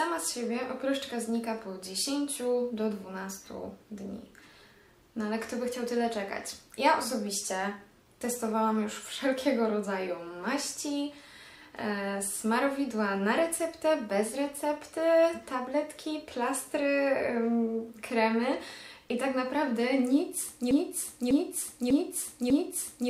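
Broken-record loop from 20.71 s to the end: a 0.6 s fragment repeats four times, likely from a stalled stream resending its last piece.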